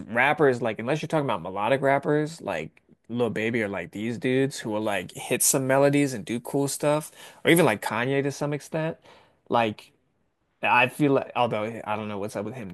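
From 4.82 to 7.89 s the speech turns thin, bright and sibilant: pre-emphasis left on, an FM-curve treble boost never undone, about 13 dB at 10 kHz.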